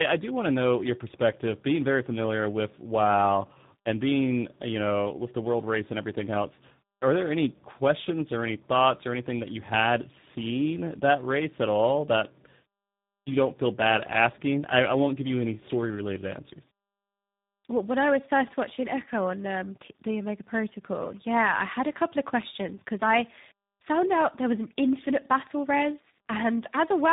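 A speech clip with tandem speech coding from start to finish. The sound points to two low-rate speech coders in a row, G.726 at 24 kbit/s and then G.729A at 8 kbit/s, with G.711 mu-law in between. Each coder re-encodes the damage left by the one before. The result is rough, muffled and warbly. Nothing is heard above 3.8 kHz, which fits a narrowband telephone path.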